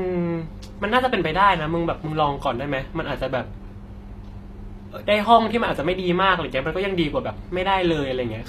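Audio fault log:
throughout HE-AAC compression: treble likely rebuilt by spectral band replication at a low bitrate, fitting about 24 kbps, so s sounds turn plainly gritty and lispy.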